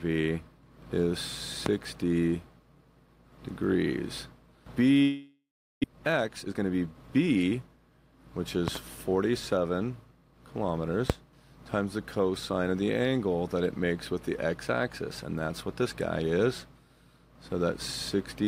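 At 1.66 to 1.69 s a loud pop appears, likely from a sudden voltage step such as a switch or static discharge entering the signal path. The circuitry after it shapes that step into a single sharp pulse about 20 dB above the surrounding sound, heard as a crisp crack laid over the audio, which carries on beneath it without a break.

From 5.02 to 5.85 s comes a long network dropout, likely packets failing to arrive for about half a second. The receiver first stretches the last sound it had into a fading buzzy hiss, then runs out of material, leaving roughly 380 ms of near silence. When the audio resumes, the lost half second is simply absent, and playback now sits around three tenths of a second later than before.

The receiver then works off that backlog with a jitter buffer speed-up from 5.92 to 7.77 s. Packets that bunched up after the gap overfilled the buffer, so the receiver repeatedly cut out short stretches of a pitch period or so, about 300 ms in all. 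The sound runs at roughly 115 % speed with its pitch unchanged and comes across as rushed.

Two more loud pops follow. At 8.68 to 8.78 s there is a double pop, two thumps in quick succession about 20 dB above the sound, likely a plug or connector glitch. At 11.10 to 11.13 s a single, harder crack stands about 25 dB proud, likely another static or switching transient, again riding on top of continuing audio.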